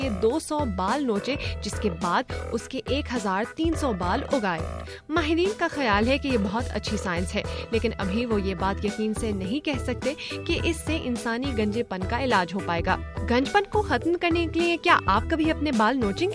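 No technical faults are audible anywhere in the recording.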